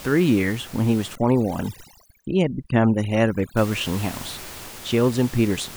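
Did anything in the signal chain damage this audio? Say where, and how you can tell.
Yes. From 1.15 to 3.57 s the speech loses its quiet detail, and the background room noise, which sits about 18 dB below the speech elsewhere, collapses into near silence with twinkling specks. That is overdone noise removal in the call processing stage, cutting frequency bands near its noise estimate along with quiet speech detail.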